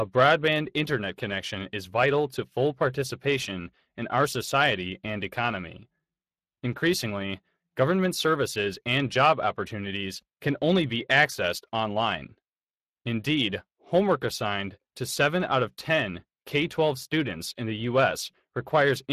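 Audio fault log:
Throughout: Speex codec. The speech has a plainly audible hoarse, noisy grain because this CELP codec has too few bits to model the excitation signal accurately, which fits a bitrate around 22 kbps. Nothing sounds above 15.3 kHz.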